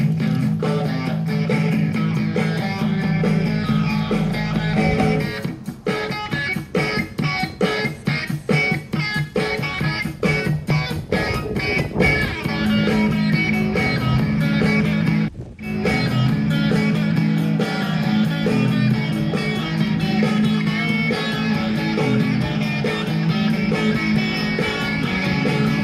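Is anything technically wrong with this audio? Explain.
Yes. DAB burbling occurs at 10.66 to 10.71 s. Residual bit errors corrupt sub-band levels over a few frames, producing a brief burble.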